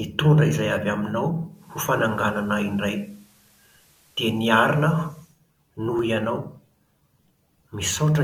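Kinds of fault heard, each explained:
Digital radio blending to analogue: the receiver cross-fades to FM over 214 ms at 1.48 s and back at 5.41 s. Faint hiss appears, and level shifts about 1 dB.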